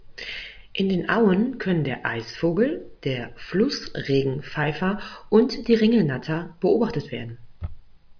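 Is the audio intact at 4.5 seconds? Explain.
Yes, the audio is intact at 4.5 seconds, with no dropout, click, distortion or other fault audible at that point.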